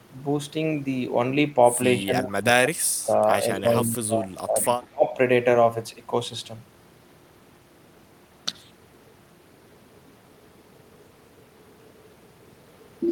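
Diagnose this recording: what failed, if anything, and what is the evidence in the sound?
The call processing stage, likely the echo canceller, is the failure: with both sides talking at once, it could not tell the near talker from loudspeaker echo and turned everything down. This speech suppressed in double talk shows as dips from 1.98 to 2.87 s (deepest about 30 dB), from 3.52 to 4.6 s (about 20 dB, roughly a second affected), and a brief hole from 4.89 to 5.06 s cutting about 40 dB.

The same echo canceller likely also lets some loudspeaker pickup through, so an echo leak sends a delayed copy of the speech back. It trails the original by 193 ms, appearing as a faint scrap at 3.54 to 3.6 s, about 30 dB below the speech, and a longer stretch from 4.62 to 4.87 s at about 25 dB down.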